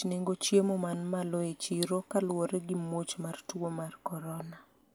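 No technical faults are audible anywhere in the speech.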